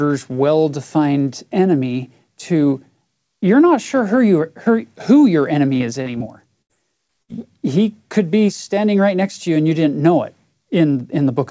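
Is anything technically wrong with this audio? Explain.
Yes. Between roughly 5.8 and 7.3 s, the audio shows a cluster of packet-loss damage, with four short concealed gaps and two longer bursts.

Short concealed packet loss occurs at 5.78–5.82 s, 6.02–6.08 s, 6.18–6.22 s and 7.07–7.11 s. In each case, about 20 to 40 ms of data arrived too late to decode. The receiver patched the hole by extending the preceding sound and then crossfading back, which leaves a brief smear or wobble.

A burst of packet loss occurs at 6.62–6.71 s, with about 80 ms missing, and again at 7.23–7.30 s, with about 60 ms missing. Several consecutive packets were dropped, so concealment carried the last sound forward while fading it. This is heard as a held buzz or decaying hiss, after which playback jumps ahead past the lost material.

The gaps sit on a call path whose band stops at 8 kHz, which fits G.722 at 64 kbps.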